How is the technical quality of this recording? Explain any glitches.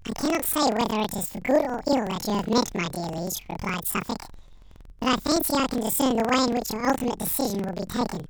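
The quality is poor: the whole speech recording is garbled by planar audio read as interleaved. Each 46.44 ms block plays twice at double speed, an octave high, with a 21.5 Hz flutter. The spectrogram shows doubled harmonic spacing, and the waveform has repeating seams at each block boundary.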